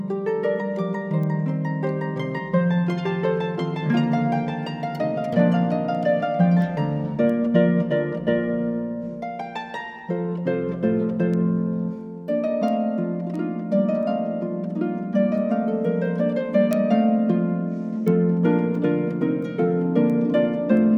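A digital link is being read by a receiver running on its own clock, unlocked from the sender's and off by roughly 30 ppm. From 0.56 s to 20.77 s this produces word clock ticks, around thirty sharp clicks of uneven strength recurring about every 0.7 seconds, each where a single sample slips.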